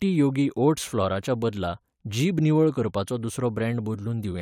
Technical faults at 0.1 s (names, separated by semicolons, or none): none